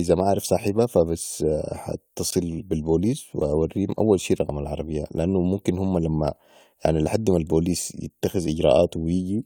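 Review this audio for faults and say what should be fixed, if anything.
Gap at a join of encoded pieces at 2.31 s: a 19 ms gap cuts into the speech, left by encoder start delay and last-frame padding kept at the splice. To prevent it, trim each piece's encoder delay and padding before joining, or encode the audio in one continuous pass.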